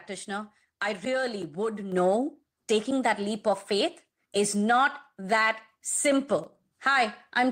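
Speech runs through the whole clip, and at 1.92 s the level jumps. The voice and the background noise rise together, by about 6 dB, in a single step. This is a microphone volume stepped up fault. The call software judged the microphone too quiet and raised the device's input volume at once, not gradually. Because the gain changed before any processing, everything the microphone picks up gets louder at the same instant. The room noise therefore rises along with the voice.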